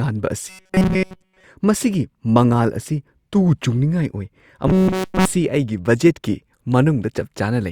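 From 0.49 to 1.44 s and 4.68 to 5.25 s, the speech turns into a rigid 188 Hz metallic buzz. This is robotic sound, likely from one short buffer of about 5.3 ms repeating.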